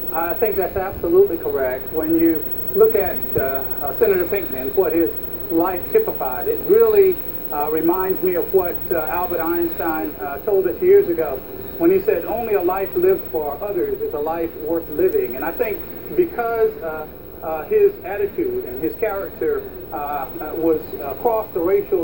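A flipped bit in memory or on a digital link causes a bit error spike at 4.29 s and again at 15.13 s. The first corrupts two consecutive samples, the second just one. Each time, a sample value jumps by a power of two to about -18 dBFS and snaps straight back, unrelated to the surrounding sound. The result is a single sharp, broadband tick at each moment.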